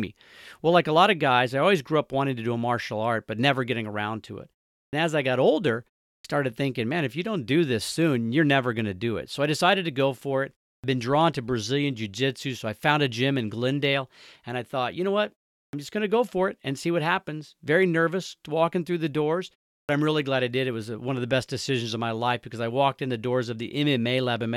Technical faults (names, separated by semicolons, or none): clipped start after a pause